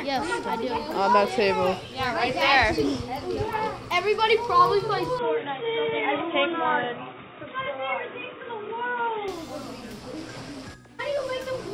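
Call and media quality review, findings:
5.19 to 9.28 s: audio turns dull and boxy, then clears at 9.28 s. No gap at either switch, no level step. Likely an input switched to a poorer device, such as a headset call profile, whose narrow capture band cuts everything above 3.8 kHz and brings a faint new noise floor roughly 50 dB down. Spectrogram: hard ceiling at 3.8 kHz across that span, full bandwidth either side. Waveform: envelope continuous through both transitions.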